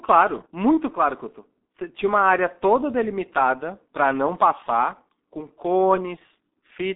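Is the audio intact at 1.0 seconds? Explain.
No. At 1.0 s the sound is muffled and hoarse, with smeared consonants and no content above about 3.8 kHz. This is the G.723.1 codec, present for the whole clip. It passes roughly 250 Hz to 3.7 kHz and rebuilds the voice from coarse 30 ms frames at about 6.3 kbit/s.

The same moment also falls within a stretch of channel delay (comb filtering) from 0.59 to 2.94 s, which adds a dull, hollow colour. One channel lags the other by a few samples, roughly a tenth of a millisecond, and the two are summed to mono. That puts the first cancellation notch near 5 kHz, so within the remaining band the upper frequencies fade progressively.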